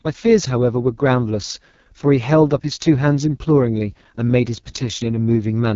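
Speech heard through an AMR wideband (HD Voice) codec running at the low end of its range, which fits about 6.6 kbit/s, throughout the clip: heavy coding damage leaves a rough, raspy texture, with nothing above about 7.4 kHz.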